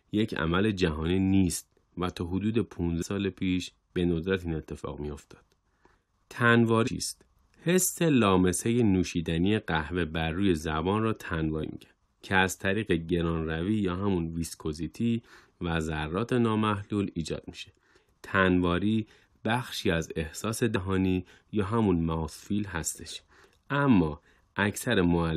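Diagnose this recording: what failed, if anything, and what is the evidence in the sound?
Compressed frames skipped, at the codec or decode stage. The speech lurches forward at 3.01, 6.86, 11.62 and 20.75 s, losing roughly 200 ms at the first two and about 70 ms later. Whole 23.2 ms frames are left out at each join.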